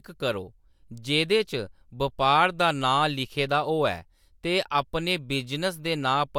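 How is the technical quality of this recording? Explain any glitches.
No technical faults turn up anywhere in this speech recording, so there are no glitches to explain. Nothing in the signal chain breaks up, drops out or interrupts the talker at any point.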